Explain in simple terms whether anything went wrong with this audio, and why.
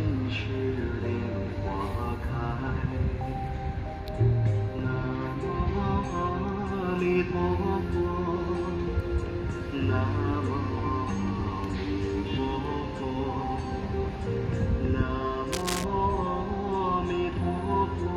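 A worn cable or connector was likely jostled, causing cable scratch noise: a fairly loud scratchy rustle over the sound from 15.52 to 15.84 seconds.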